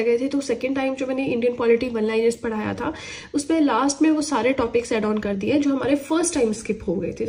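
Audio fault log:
Throughout: clock drift between sender and receiver. The sending clock runs about 5 percent slow, so the receiver's buffer keeps draining and must be topped up. Unlike network jitter, the timing pull is steady and always in one direction, not random.
0.08 to 7.15 s: repeated timing corrections. Short pieces are repeated at uneven spacing, slowing the stretch to 95% speed and adding roughly 0.3 s. Unlike packet loss, the edits repeat audio rather than dropping it.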